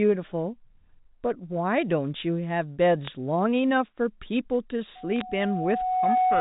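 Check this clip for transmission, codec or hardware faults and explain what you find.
Two faults are audible: bit errors on a digital phone line, and a loudspeaker feedback squeal late in the speech. The telephone-band coding itself sounds clean.

Bit errors appear from 3.05 to 3.08 s and from 5.16 to 5.21 s. Flipped bits corrupt single samples, producing sharp ticks and brief crackle over the speech.

Loudspeaker feedback squeal starts at 4.95 s and runs to the end. The microphone hears its own loudspeaker, and a 738 Hz tone swells over about a second to roughly 5 dB above the speech.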